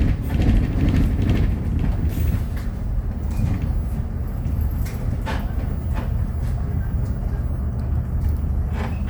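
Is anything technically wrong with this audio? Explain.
No, nothing in this audio points to a technical fault.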